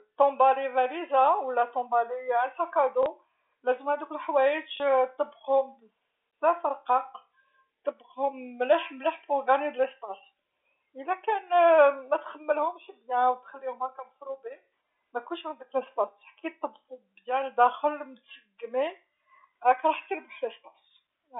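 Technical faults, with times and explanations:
3.03–3.06 s and 4.77–4.80 s, packet loss with last packet repeated: each gap is 30 ms, which fits a single lost packet, and the receiver fills it by replaying the previous chunk. The loop seldom lines up with the pitch period, so you get a small blip, right before "لازم هادوك" and again before "طبقهم بزاف", all on the narrow 300 Hz to 3.6 kHz telephone band.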